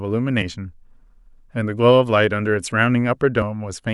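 A speech recording with two short bursts of damaged data in a compressed stream, at 0.38 to 0.43 s and again at 3.39 to 3.43 s, each lasting about 44 ms. At those points the encoded bytes are corrupt, so the decoder cannot parse the affected frames, loses frame sync and hunts for the next valid header. Each event is heard as a brief chirp, squawk, click or short hole before normal decoding resumes.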